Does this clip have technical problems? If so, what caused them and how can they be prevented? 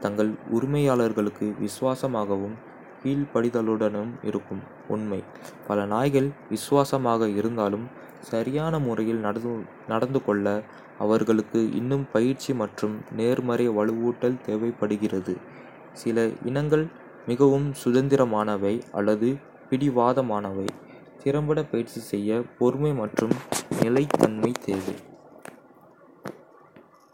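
No, this clip has no technical problems, so there is no cause to trace and nothing to prevent.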